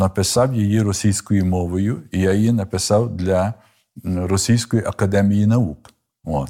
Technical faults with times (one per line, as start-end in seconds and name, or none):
none